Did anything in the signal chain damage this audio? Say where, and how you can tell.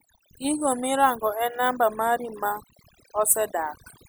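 Yes. The damage happened at the processing stage: overdone noise removal, a noise suppressor set far too aggressively, runs through the whole clip. Whenever a frequency band sits close to the suppressor's noise estimate, it cuts that band hard or mutes it, and the quieter parts of the speech are removed along with the noise. You can hear it in the gaps, which fall to near silence dotted with twinkling specks.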